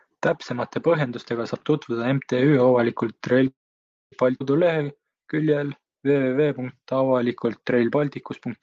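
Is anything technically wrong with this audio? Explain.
Yes, there are three timing faults in this speech, all typical of a call carried over the network.

From 3.47 to 4.14 s there is a call audio freeze. The likely cause is packets stalling until the jitter buffer ran dry. The last sound is stretched into a brief fading buzz, then about 570 ms of silence. Nothing is lost: speech resumes exactly where it stopped. That distinguishes it from a dropout, which removes audio.

At 4.40 to 4.42 s the playback skips ahead. Roughly 0.4 s of speech was discarded, either in transit or by an overfull buffer, and the two sides are spliced with almost no gap. Unlike the freeze, this cuts material out instead of inserting a pause.

From 4.65 to 8.00 s there is a jitter buffer slow-down. The receiver rebuilt its reserve by repeating single pitch periods and bits of pauses, adding about 376 ms. Delivery runs at 89% speed with unchanged pitch, so sounds feel drawn out. 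This differs from a freeze because the speech keeps moving, only more slowly.

Throughout the clip, the Opus call path limits the audio to about an 8 kHz band.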